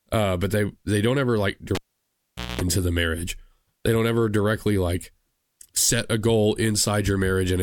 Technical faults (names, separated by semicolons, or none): cable pulled and plugged in